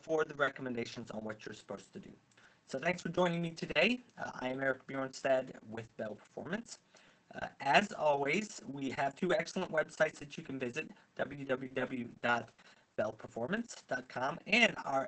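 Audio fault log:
11.67–12.98 s, repeated packet loss (robotic sound): four short dropouts in quick succession, about 120 ms of audio missing in total and none longer than 40 ms. Each hole is covered by extending the preceding sound, about 150 ms of filler overall, and the patched region spans roughly 0.4 s. The rapid alternation of real and continued sound gives a choppy texture, heard against the call path's top end, which stops near 8 kHz.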